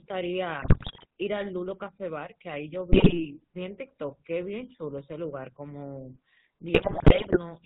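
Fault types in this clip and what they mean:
GSM full-rate codec: The speech has been squeezed through the original GSM coder, which rebuilds the voice from a vocal-tract filter excited by a sparse, regular pulse train instead of the real waveform, and discards everything above 4 kHz. Across the whole clip this gives a plainly audible buzzy, gravelly roughness and a dull, band-limited tone, consistent with the 13 kbps full-rate scheme.
GSM bit errors: Corrupted bits on the radio link reached the decoder, so some frames were rebuilt from wrong filter, pitch or gain values. Each hit frame gets a warped spectrum or a sudden level jump, and the voice breaks into squawks, pops and gargling. This happens in three bursts: 0.62 to 1.06 s, 2.92 to 3.24 s, and the longest from 6.74 to 7.38 s.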